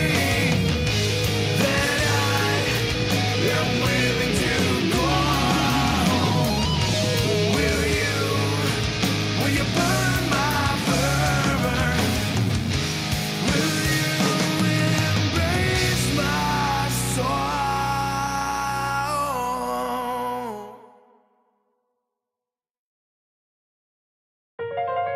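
Nothing in the recording stood out as a technical problem on listening.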